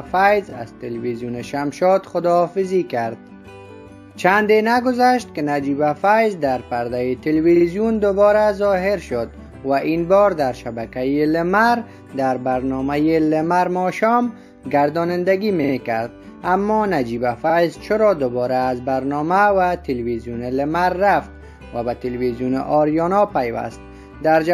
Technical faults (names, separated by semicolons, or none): repeated frames